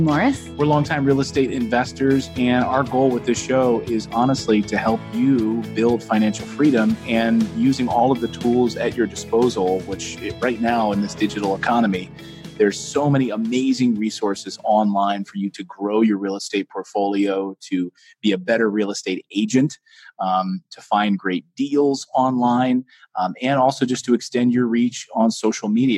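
Crude rate conversion runs through the whole clip: the sound carries a faint gritty, inharmonic fizz that tracks loud and high passages, which fits a 44.1 kHz to 48 kHz change done by linear interpolation without filtering. A spectrogram would show spurious, unrelated partials, around 45 dB down.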